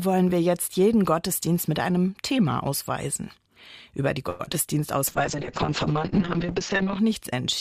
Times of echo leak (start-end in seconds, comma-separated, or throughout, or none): none